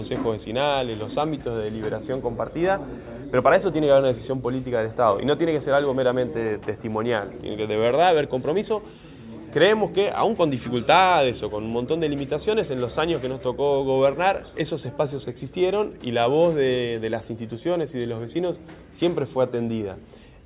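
No technical faults can be heard anywhere in the signal, which stays steady and intact throughout.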